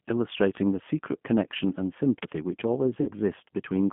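G.729 codec damage runs through the whole speech clip: the line passes only about 150 Hz to 3.4 kHz, and the 8 kbit/s model rebuilds the voice from a vocal tract filter, pitch predictor and a few pulses per frame, leaving a plainly rough, synthetic edge. VoIP packet loss concealed by the speech codec follows from 3.01 to 3.12 s, where about 60 ms of audio, consistent with two lost packets, was filled by extrapolating the last pitch and filter at falling gain, producing a fading buzzy tone or coloured noise that stays weak briefly after packets resume.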